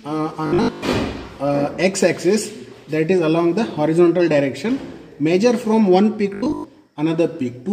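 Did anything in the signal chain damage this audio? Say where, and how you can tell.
Yes. Robotic sound from repeated short buffers occurs at 0.47 to 0.93 s and 6.34 to 6.64 s, where a rigid 50 Hz buzz replaces most of the audio. This likely comes from the driver or buffer stage replaying a 20 ms block whenever fresh data arrives late.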